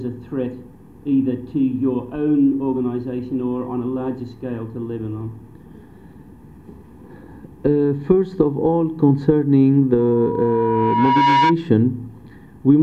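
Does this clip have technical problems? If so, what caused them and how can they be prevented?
Yes. A loudspeaker feedback squeal starts at 9.98 s and runs until 11.56 s, a single tone near 964 Hz that swells over roughly a second and a half and ends up about 5 dB above the rest of the sound. The microphone was picking up a loudspeaker it was feeding, and at that frequency the loop gain went above one, so the tone kept growing on itself. Lowering monitor gain, moving the microphone away from the loudspeaker's coverage, or notching 964 Hz would prevent it.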